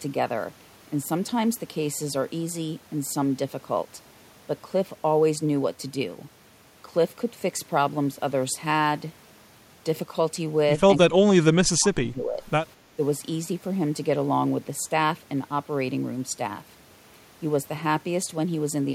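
Speech suppressed in double talk, 11.08 to 12.42 s: the voice sinks by roughly 25 dB, likely because the echo canceller could not separate this side's talk from the overlapping loudspeaker echo. Background gated by the echo canceller, 12.77 to 12.93 s: the room tone briefly ducks by about 6 dB while loudspeaker output plays, then returns.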